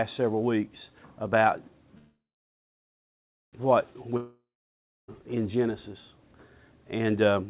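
At 1.98 s the sound stops advancing and the last fragment is stretched into a fading buzz that decays to near-silence for about 1.35 s. This is a call audio freeze, most likely packets held up in transit until the jitter buffer ran dry. At 3.55 s the audio resumes exactly where it halted, so nothing is lost, but everything after it now runs about 1.55 s later than it should.

At 4.17 s a long network dropout begins. Again the final fragment smears into a decaying buzz, with about 0.66 s of silence within the roughly 0.91 s of filled gap. Unlike the freeze, the sound returns at 5.24 s further along, with roughly 0.92 s of material never played, likely because the packets for that stretch were lost. The whole clip carries the band limit of a call path, with nothing above 4 kHz, consistent with G.711 A-law at 64 kbps.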